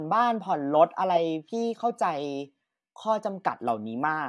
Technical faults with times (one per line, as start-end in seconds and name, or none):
none